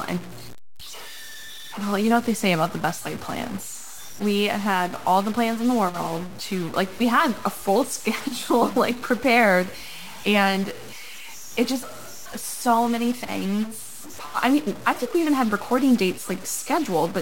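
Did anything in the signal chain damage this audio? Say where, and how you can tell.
Yes. Across the whole clip the speech carries a harsh, buzzy distortion, and the pauses between phrases fill with a gritty noise floor instead of going quiet, so the damage runs from start to end rather than at any single moment. That pattern is most likely a stuck bit at the converter or its data lines: one bit held fixed shifts roughly half the samples by a step of around -35 dBFS, tracking the waveform and flipping around zero in the gaps.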